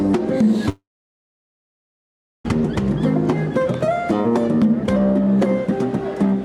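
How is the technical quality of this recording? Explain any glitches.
The recording has one real glitch, a long gap near the start. From about 0.69 s to 2.46 s the sound breaks off. For a short moment the last bit of sound carries on as a fading buzz, then there's about 1.6 s of silence before the audio picks up again further along. That's most likely a long network dropout: roughly 1.8 s of packets never arrived, the receiver briefly stretched what it had, gave up, and the missing stretch is simply gone.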